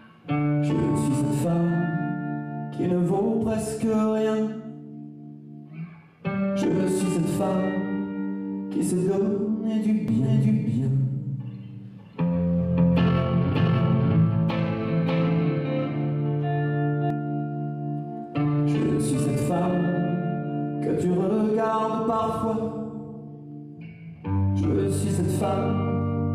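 From 10.08 s to 17.10 s a doubled audio track is audible: a second, full-band copy of the sound runs about half a second behind the first, at roughly the same level. The delayed copy carries no decay or room colouring, so it reads as a clean, out-of-step repeat rather than an echo, and it cuts in and out abruptly at both ends. The likely cause is a second capture path with added latency being mixed in alongside the direct one.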